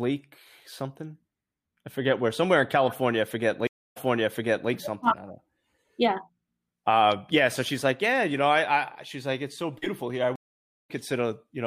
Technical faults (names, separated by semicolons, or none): stream reconnect